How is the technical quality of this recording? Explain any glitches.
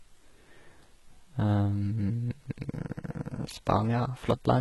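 The technical quality is poor, with heavy compression damage across the whole speech clip. Throughout, the top end stops dead at about 11.8 kHz, yet the treble below that sounds synthetic, with s sounds gritty, metallic and lisping. This is likely HE-AAC compression at a very low bitrate, around 16 kbps, where the treble is rebuilt from copied lower bands rather than coded. Unlike a plain low-pass or ordinary lossy codec, the treble isn't dulled but synthetic and misaligned.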